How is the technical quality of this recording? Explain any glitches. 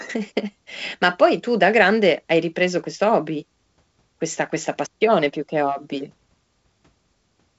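No glitches or faults heard.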